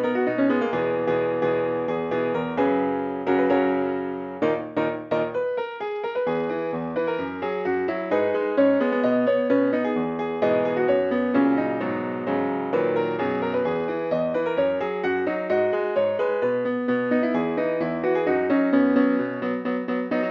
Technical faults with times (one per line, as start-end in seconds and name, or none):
5.47-7.89 Bluetooth SBC bit pool drop
12.97-14.15 Bluetooth SBC bit pool drop
18.77-20.30 Bluetooth SBC bit pool drop